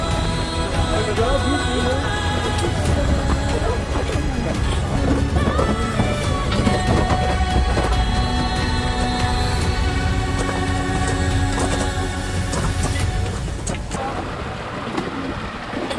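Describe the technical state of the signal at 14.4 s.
At 14.4 s the signal is intact, with no audible dropout, distortion or other technical fault at that moment.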